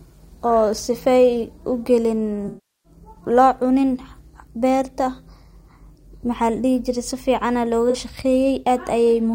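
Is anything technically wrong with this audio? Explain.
Yes. AAC frame loss with concealment occurs at 2.48 to 2.92 s and at 7.90 to 7.96 s in this speech clip. The decoder rebuilds missing frames from the last good spectrum. The longer gap, which fits about 17 lost frames, decays into a very faint noise floor and fades back. The shorter one, about two frames, leaves a smeared, noisy or phasey patch. Unlike a hard dropout, neither gap cuts off abruptly.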